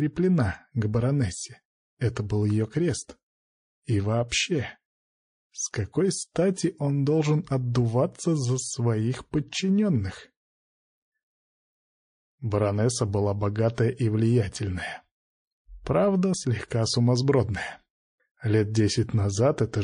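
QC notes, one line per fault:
Throughout: MP3 compression, plainly audible. Weak detail flickers in and out from moment to moment, giving a watery, swirly texture with metallic chirps on bright sounds. This points to a low bitrate, around 40 kbps, likely squeezing the encoder's bit budget.
4.29 s and 13.75 s: pre-echo. A hiss rises about 17 dB and about 13 dB ahead of each sharp attack, spreading 32 ms before it. The codec held long 52 ms blocks and never switched to short ones, so noise smeared backward and the attacks sound soft.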